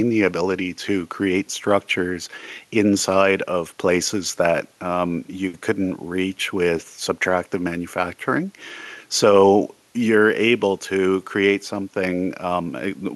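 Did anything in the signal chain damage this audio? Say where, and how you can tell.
No, no damage is audible.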